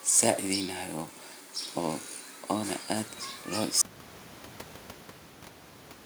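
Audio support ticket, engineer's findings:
Audio dropout to silence at 3.82 s, hard cut to silence through the end, about 2.2 s lost. Likely input loss (disconnected device, failed link or stray mute) while recording continued. Unlike a gate or fade, even the raised room noise vanishes.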